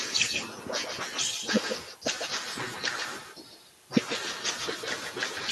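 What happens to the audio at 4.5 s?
At 4.5 s, the speech carries an echo with no canceller, as it does for the whole clip. The far end's loudspeaker feeds its microphone, and nothing removes it. A thinner copy trails each syllable by roughly 150 ms, only about 6 dB quieter.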